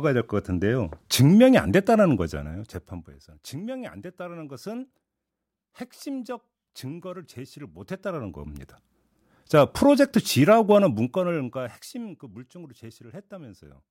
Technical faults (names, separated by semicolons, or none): zipper noise